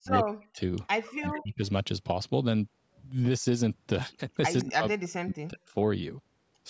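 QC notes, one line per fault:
0.00–0.61 s, 1.19–1.62 s and 4.63–5.66 s: speech suppressed in double talk. The speech dips by up to about 40 dB, longest in the last stretch. This is likely an echo canceller turning everything down while both sides talked at once.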